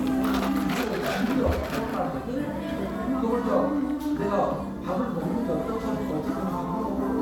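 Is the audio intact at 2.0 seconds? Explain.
Yes, the audio is intact at 2.0 seconds, with no dropout, click, distortion or other fault at that moment.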